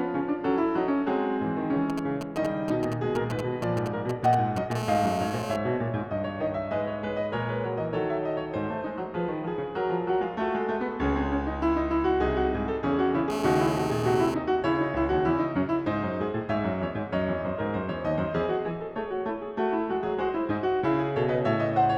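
From 1.90 to 4.73 s, a 2G handset close to the recording chain was exchanging short groups of radio bursts with the network, and the audio circuitry rectified them. The result is GSM signalling bursts: a galloping dit-dit-dit of short buzzes at about 217 Hz, sitting only slightly below the music in level.

From 4.75 to 5.56 s, and again from 13.3 to 14.34 s, the handset was transmitting continuously in its call state, pulsing 217 times a second. Rectification of that steady pulse train produces GSM phone buzz: a harsh, raspy tone at 217 Hz, dense with harmonics and about 7 dB below the music. It bears no relation to the music.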